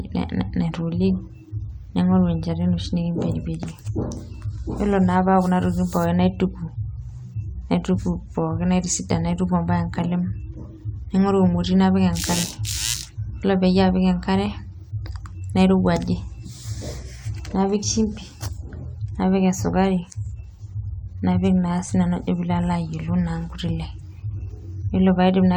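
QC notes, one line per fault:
Nothing stood out on listening to the speech in this clip.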